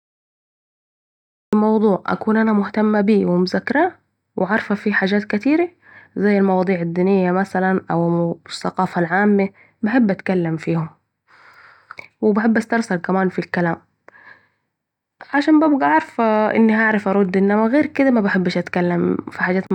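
The clip has a cut-off start. It opens with digital silence until 1.53 s. Then speech begins abruptly, mid-sound, just before "موضوع أكون أنا مهتمه", with no natural attack.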